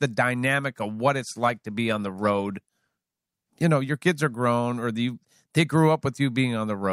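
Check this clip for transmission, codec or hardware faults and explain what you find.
There's one fault here, a call bitrate drop from 1.17 to 3.73 s. The speech goes rougher and watery for about 2.5 s, which fits the bandwidth estimate falling and the encoder being squeezed from around 64 down to 27 kbps, so it codes much more coarsely before recovering.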